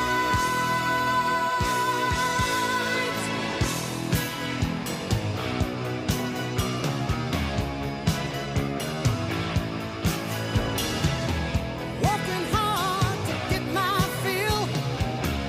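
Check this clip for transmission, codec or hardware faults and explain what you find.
No transmission, codec or hardware faults can be heard anywhere in the recording, and the signal stays continuous and stable throughout.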